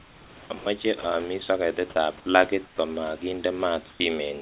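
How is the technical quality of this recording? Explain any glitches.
The recording has the narrow, phone-like sound of a call line, with nothing above 4 kHz, which fits a narrowband codec of the G.711 kind. Beneath the speech there is real room noise about 24 dB down. Three kinds of glitch stand out, all tied to the sender switching its transmission on and off.

Comfort noise in place of the background appears from 0.0 to 0.5 s, from 2.66 to 2.78 s and from 3.9 to 4.0 s. In these pauses the natural room noise, sitting about 23 to 26 dB below the loudest speech, gives way to a smooth, featureless hiss. That hiss is quieter than the real background by about 3, 9 and 5 dB respectively. The likely cause is discontinuous transmission: the sender stops sending when it hears no speech, and the receiver synthesises noise roughly matching the background. Real room noise has texture and small shifts. 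This noise is flat and steps down in level.

Sound is dropped by the voice detector at 0.58 to 0.66 s (80 ms), 1.02 to 1.04 s (20 ms) and 2.2 to 2.26 s (60 ms, of which about 20 ms is actual speech lost). In each case a stretch of sound was treated as background, likely by the sender's voice detector, and the receiver played comfort noise until sending resumed. A network dropout would leave silence or a smeared, robotic patch. Here the gap is instead filled by steady noise or near silence, and the speech comes back when the detector triggers again.

An onset is clipped by the voice detector from 1.94 to 1.96 s. Here the detector was likely slow to notice that speech had restarted, so the first 20 ms were never sent and comfort noise stood in for them. The word therefore begins abruptly, missing its soft attack. A dropped segment has speech on both sides of the gap. This one falls right at the start of a sound that follows a pause.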